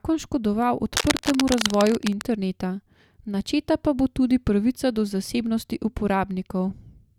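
From 0.93 to 2.25 s, scratchy, rustling bursts sit just under the speech level: cable scratch noise, likely from a worn connector being moved.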